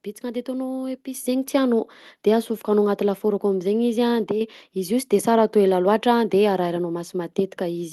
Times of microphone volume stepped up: 1.14

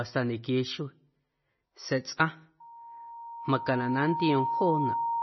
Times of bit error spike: none

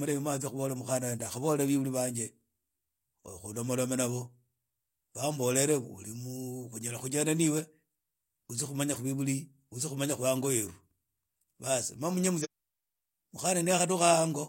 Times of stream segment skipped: 12.40-12.46

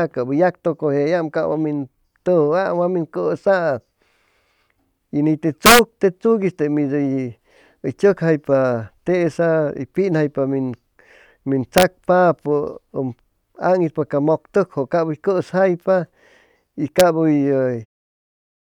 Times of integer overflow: 5.66-5.79, 11.78-11.83, 17.00

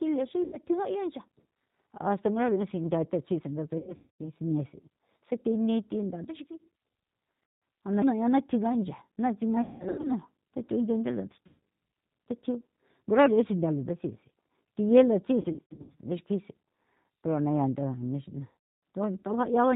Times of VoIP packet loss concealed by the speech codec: 0.44-0.58, 3.78-4.22, 7.44-7.62, 9.62-10.12, 11.47-11.59, 15.41-15.96, 18.50-18.54

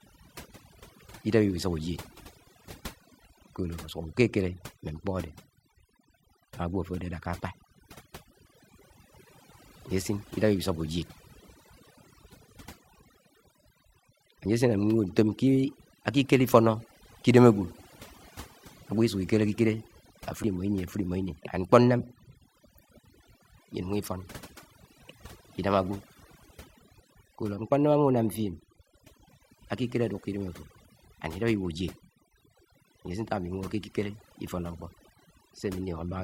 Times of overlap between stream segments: 2.47, 8.47, 14.45, 20.44, 26.43, 32.41

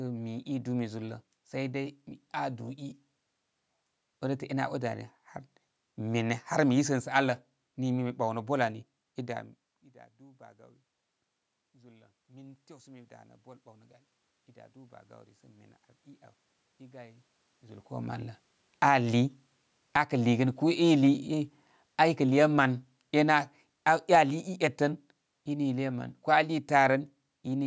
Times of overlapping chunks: none

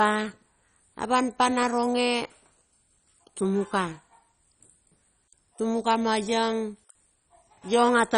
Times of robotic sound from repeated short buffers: none

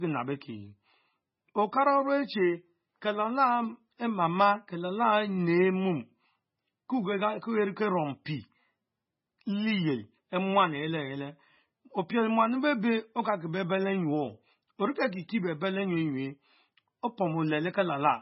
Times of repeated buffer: none

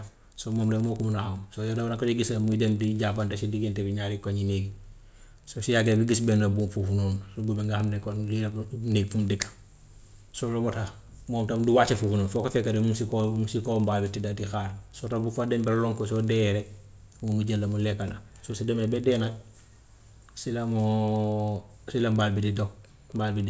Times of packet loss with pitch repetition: none

